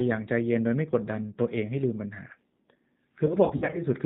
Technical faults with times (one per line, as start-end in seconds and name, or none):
0.00-4.05 G.729 codec
3.26-3.82 VoIP packet loss concealed by the speech codec